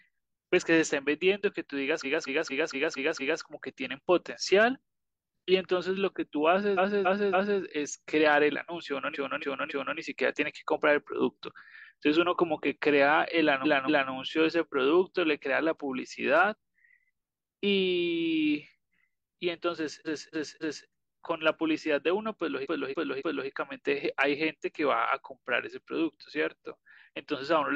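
Repeated frames stutter the speech six times: at 2.0 to 3.39 s, where a 232 ms block plays six extra times; at 6.74 to 7.57 s, 9.11 to 9.94 s, 20.02 to 20.86 s and 22.62 to 23.46 s, each a 279 ms block replayed three extra times; and at 13.61 to 14.08 s, a 232 ms block twice more. A stretch of compressed frames was sent again, so identical sound returns and the speech falls behind. Unlike a dropout, nothing is missing.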